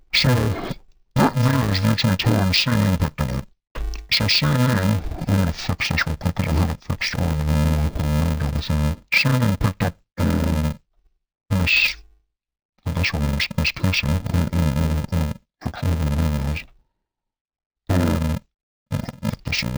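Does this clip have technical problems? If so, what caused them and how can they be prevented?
Yes. Interleaved audio read as planar, throughout: each 2.67 ms block is split into halves, giving dull, robotic sound buzzing at 375 Hz, which fits a 128-sample block. Prevent it by matching the reader's channel layout to the stream's actual interleaved format.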